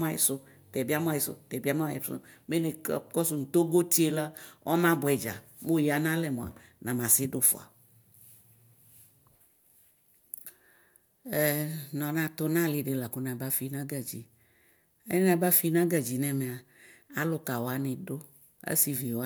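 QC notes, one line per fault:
Nothing stood out on listening to the speech.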